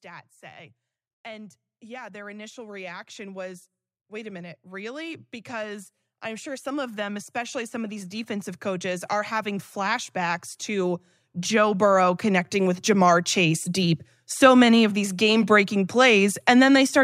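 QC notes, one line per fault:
1.23–13.96 s automatic gain rising: the gain control slowly lifts quiet input about 24 dB, so background swells with the speech, unlike a talker getting louder.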